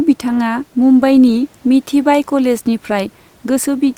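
Speech recording with no technical faults to report; the faint room noise, about 38 dB below the speech, belongs to the recording space rather than the system.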